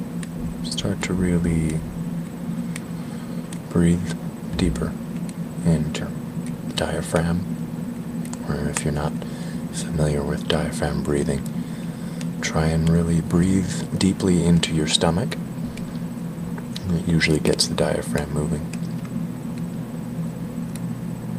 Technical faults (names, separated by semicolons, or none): skip ahead; jitter buffer speed-up